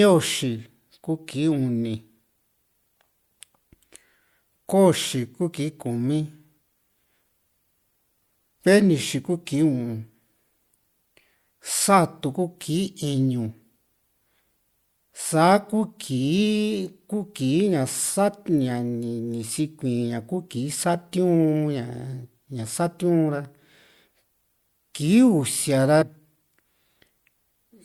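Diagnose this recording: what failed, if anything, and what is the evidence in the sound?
Compressed frames skipped at 6.57, 14.38 and 26.01 s, at the codec or storage stage. The speech jumps ahead by roughly 150, 100 and 150 ms, which fits whole 26.1 ms frames missing or rejected by the decoder. Overlapping neighbouring frames smear each join into a brief blip.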